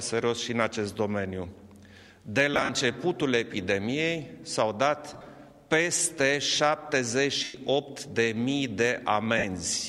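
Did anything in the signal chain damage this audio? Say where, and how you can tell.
Yes. Four short stretches turn to a grainy, hissy smear: 2.54 to 2.70 s, 5.13 to 5.29 s, 7.44 to 7.55 s, and 9.38 to 9.44 s. The first two break up in several bursts, with runs of about 50 and 40 ms. This is lost LE Audio frames on the Bluetooth link. The LC3 decoder filled each gap by replaying the last spectrum with scrambled phase, and the spacing suggests 7.5 ms frames.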